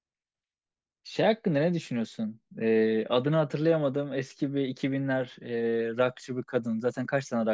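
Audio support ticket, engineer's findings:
Engineer's findings: no audio fault found in this speech recording.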